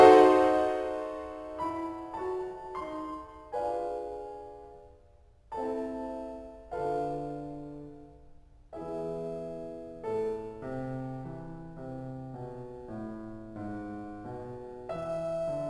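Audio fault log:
throughout: aliasing. The music appears to have been downsampled from 44.1 kHz to 24 kHz without an anti-alias filter, so content above the 12 kHz fold frequency reflects back as unrelated tones roughly 30 dB below the music, giving gritty, metallic highs.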